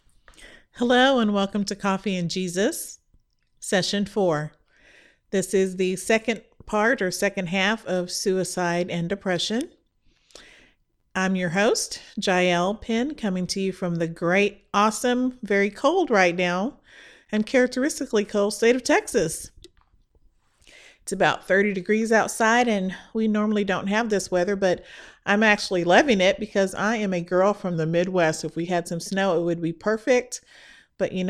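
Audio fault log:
22.26–23.12 s, drift correction step: a clock-matching stage likely jumped the playback rate up by about 6% in one step to drain its buffer, so the speech runs faster and sits about a semitone sharp until it snaps back just before "we normally don't have".
27.74–28.67 s, drift correction step: after "I am a girl", the rate likely dropped about 6% to refill the buffer, slowing the speech and lowering its pitch by roughly a semitone before it returns at "had some snow it".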